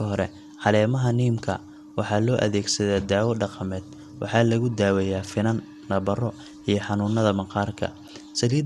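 Throughout the recording, the speech has likely passed through MP2 compression at a low bitrate, with damage that fits a rate around 80 kbps. Starved of bits, the encoder switches off its upper sub-bands, so nothing survives above about 12.1 kHz, and the bands it keeps are quantised coarsely and drop in and out. The result is a dull, muffled top end, with a gurgling, granular roughness that is plainly audible across the whole clip.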